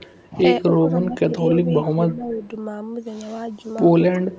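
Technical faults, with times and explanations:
0.00–0.07 s, 2.09–2.13 s and 2.30–2.48 s: echo leak. Faint, delayed copies of the talker's sound come back about 309 ms after the original, sitting roughly 30 to 40 dB under the speech. Each is brief and scrappy. This is likely a loudspeaker on the far end whose echo canceller let part of the microphone pickup through, so a quiet, lagging trace of the call rides back in short fragments.
0.31–0.40 s, 0.81–1.41 s, 1.63–2.53 s and 4.17 s to the end: speech suppressed in double talk. The talker's level sags during these stretches, by about 5 dB in the first and about 10 dB in the middle two. The final one reaches about 20 dB. The likely cause is an echo canceller that heard both sides at once, could not tell the local voice from loudspeaker echo, and attenuated everything together.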